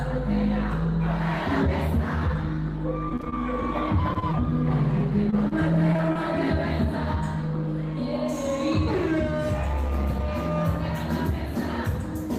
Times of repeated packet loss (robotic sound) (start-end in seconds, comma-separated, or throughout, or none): 3.09-3.34, 4.99-6.17